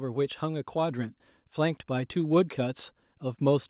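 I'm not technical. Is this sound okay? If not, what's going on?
No. From about 0.05 s to 2.86 s the whole recording slowly gets louder, the speech and the background rising together. This is automatic gain rising: the system judged the input too quiet and kept turning it up gradually, rather than in one jump.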